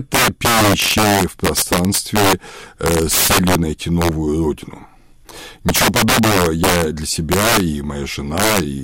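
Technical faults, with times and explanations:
Throughout: integer overflow. The speech is driven about 11 dB past full scale, and roughly one sample in fourteen wraps to the opposite sign instead of being limited. Every loud peak therefore snaps across the full range, giving violent cracks far sharper than clipping's flattened, buzzy distortion.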